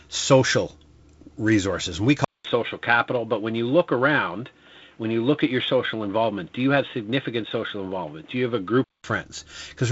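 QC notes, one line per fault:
2.25–9.04 s, input switched to a poorer device: after a 200 ms gap, content above 3.8 kHz vanishes (previously up to about 7.7 kHz), and a new noise floor appears roughly 40 dB down at the same level. The boxy sound likely reflects a narrowband headset or microphone.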